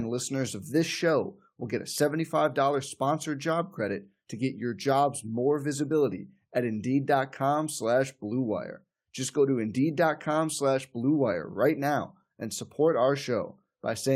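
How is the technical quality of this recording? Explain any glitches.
No glitches can be heard in the recording, and the signal stays continuous and stable throughout.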